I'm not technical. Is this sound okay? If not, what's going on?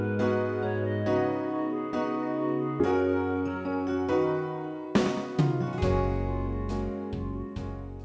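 No. Around 2.80 to 2.92 seconds there is a skip ahead. The call system stored incoming audio in a small waiting area before playing it, and at that moment a chunk, roughly four tenths of a second, was dropped, either on the way or by that waiting area when it overflowed and had to catch up. You hear the sound suddenly jump forward, with the audio just before and just after stitched together with almost no pause, so a brief piece is simply missing. The call connection, which carries nothing above 8 kHz, accounts for the muffled top end.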